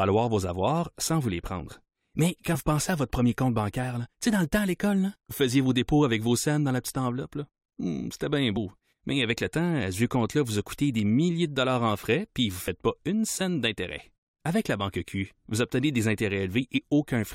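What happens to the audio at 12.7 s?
Compressed frames skipped at 12.67 s, between "frais puis vous ne" and "pas une scène d'intérêt". A stretch of the encoded stream never reaches the output, either because it is absent from the file or because the decoder rejected it as damaged, so playback jumps ahead by about 20 ms of speech.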